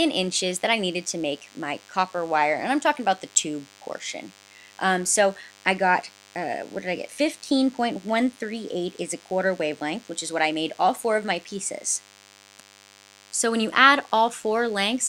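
A thin, steady buzz sits under the sound for the whole clip, rich in harmonics and roughly 30 dB below the main signal. It is DECT cordless phone buzz: a nearby handset or base station bursts every 10 ms, and the audio circuitry rectifies these into a 100 Hz tone.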